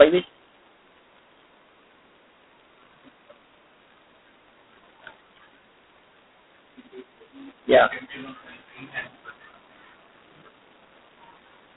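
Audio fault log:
Throughout: G.726 ADPCM. The speech is confined to a telephone band of roughly 200 Hz to 3.7 kHz, and nothing is heard above 3.9 kHz. A harsh, rasping hiss rides on the voice and swells and fades with its level. The codec sends only a coarse difference from a predicted value for each sample, so quantising errors are large. The heavy grit fits the 16 kbit/s mode, about two bits a sample.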